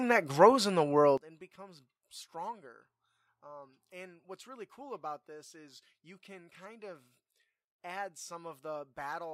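One channel inverted from 1.18 s to the end of the 9 s speech clip: the voice drops by about 20 dB, leaving a faint residue. The likely cause is reversed polarity on one stereo channel, so the centred voice cancels when both channels are summed to mono.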